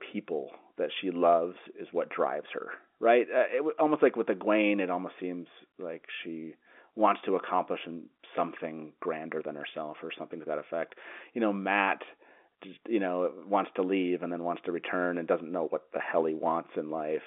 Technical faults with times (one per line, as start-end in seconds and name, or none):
none